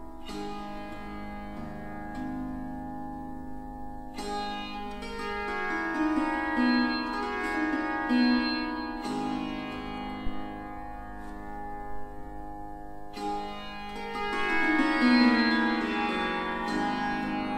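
A phantom power thump lands at 10.27 s in this audio, a deep, low-frequency knock lasting until about 10.53 s and peaking at about -20 dBFS. Its energy dies away with a decay of around 60 ms. The cause is a supply, most plausibly phantom power, being switched on or off while the input was live, so that the sudden voltage step passed through the coupling capacitors and reached the recording as a single pulse.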